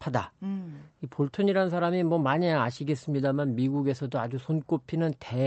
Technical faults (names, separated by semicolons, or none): none